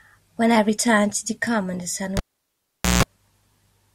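Cable pulled and plugged in, from 2.17 to 3.03 s, interrupts this speech clip: a pop as the live lead comes out, about 0.81 s of near silence, then a 0.16 s burst of 60 Hz mains buzz while only the plug tip makes contact, and a second pop when the signal returns.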